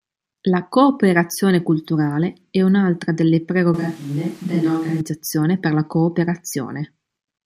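At 3.74 s, just after "culturale è un'altra delle", the speech turns abruptly roomy and thin, drops about 5 dB, and gains audible background noise, likely a switch to a distant microphone. The close sound returns suddenly at 5.01 s, before "per la".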